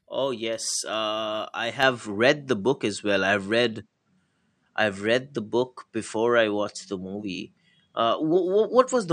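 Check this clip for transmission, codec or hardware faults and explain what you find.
One fault is present. At 1.83 s, after "yes uh I", the input likely switched to a poorer device. Its narrower band removes everything above 9.2 kHz, dulling the speech, with a level change of about 5 dB and faint new background noise.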